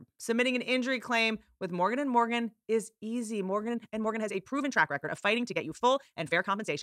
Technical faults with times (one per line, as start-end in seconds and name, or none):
3.65-6.83 time-stretched section